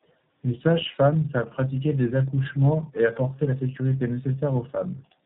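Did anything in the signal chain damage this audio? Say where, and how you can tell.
Yes, at the codec stage: tandem speech coding throughout. The speech was decoded and re-encoded by successive narrowband coders, which sounds like about three in a row, each compressing its predecessor's errors. Nothing survives above 3.7 kHz, and the result is rough, muffled and warbly.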